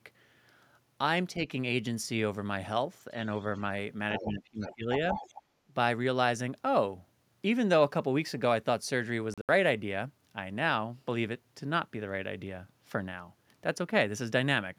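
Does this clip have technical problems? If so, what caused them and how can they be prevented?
Yes. At 3.38 to 3.59 s a faint second voice sits far below the talker, about 35 dB down, then returns much louder, only about 10 to 15 dB down, at 4.16 to 4.31 s, 4.61 to 4.75 s and 5.1 to 5.42 s. This is other side's voice leaking through, likely from loudspeaker playback that the echo canceller failed to remove. It is a distinct, separate voice rather than a smeared copy of the talker, which rules out room reverberation. Prevention: use a headset, or give the echo canceller a clean, time-aligned reference of the far-end signal.

From 4.13 to 4.89 s the talker's own level sinks, by as much as about 20 dB, over roughly 0.7 s, while that louder leaked voice is present. A second, shallower dip of about 10 dB follows at 5.68 to 5.72 s. This is speech suppressed in double talk, likely the canceller turning everything down when both sides spoke at once. 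It tracks the other voice, whereas a gain-control pump follows the talker's own loudness. Prevention: tune the double-talk detector to suppress less aggressively when both sides are active.

Between 9.34 and 9.49 s the sound drops out in pieces, about 112 ms missing in total across roughly 150 ms, the longest hole about 75 ms. Afterwards playback resumes further along, as if it had kept running. This is a Bluetooth dropout, likely a handful of wireless packets arriving too late. Because the sound skips ahead rather than pausing and picking up where it stopped, it differs from a buffer stall. Prevention: shorten the radio distance, reduce 2.4 GHz interference, or use a wired link.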